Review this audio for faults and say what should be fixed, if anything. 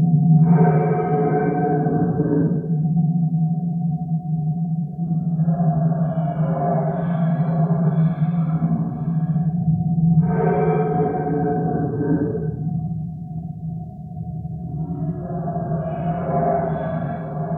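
Nothing here needs fixing, as I couldn't hear any technical faults anywhere in the recording.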